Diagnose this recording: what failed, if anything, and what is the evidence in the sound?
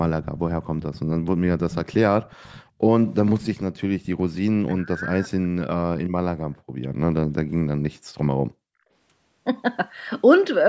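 Echo leak in the call processing stage. A faint copy of the speech trails the voice by 370 ms, at 0.23–1.0 s, 1.59–2.63 s and 3.4–4.36 s. It sits well below the direct speech. Likely cause: the far end's echo canceller left residual loudspeaker pickup.

Background gated by the echo canceller, also in call processing. The room sound dips at 0.34–0.46 s (about 10 dB), 2.66–2.83 s (about 22 dB), 6.35–6.8 s and 7.45–8.79 s (about 40 dB each). The canceller clamped the microphone while its loudspeaker played.

Speech suppressed in double talk, again in the echo canceller. From 4.67 to 5.55 s the voice is pushed down sharply, nearly gone at its deepest. Both sides were talking at once. The likely cause is that the canceller treated the talker as echo and attenuated everything.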